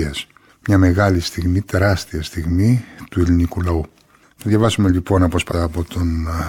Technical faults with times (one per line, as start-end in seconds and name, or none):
5.47-5.53 damaged data in a compressed stream